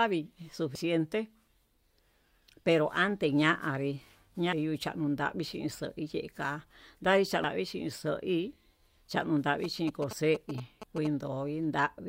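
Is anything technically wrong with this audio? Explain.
Yes, the speech carries two kinds of technical fault.

Damaged data in a compressed stream, at 0.75 to 0.78 s, 4.53 s and 7.44 s. Corrupted bytes make the decoder misread those frames and lose sync until it finds a valid header again. Each spot is a brief chirp or blip cutting into the speech.

GSM signalling bursts, from 9.64 to 11.07 s. A nearby 2G phone exchanging signalling with the network emits grouped radio pulses that the audio circuitry rectifies. This produces a galloping dit-dit-dit of short buzzes at about 217 Hz, roughly 10 dB below the speech.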